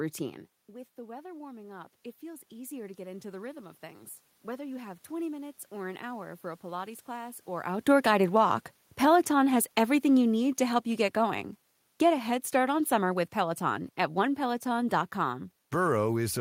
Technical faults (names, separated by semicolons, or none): automatic gain rising; automatic gain falling